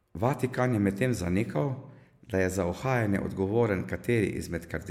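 A speech recording with no audible technical fault anywhere in the signal.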